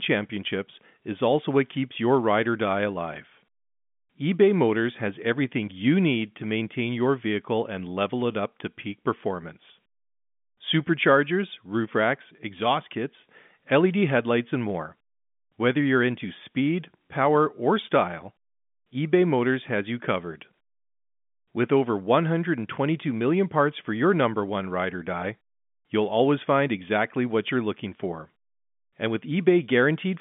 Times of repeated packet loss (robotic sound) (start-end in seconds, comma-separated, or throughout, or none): none